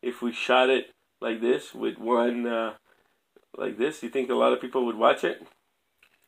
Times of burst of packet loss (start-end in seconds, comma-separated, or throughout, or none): none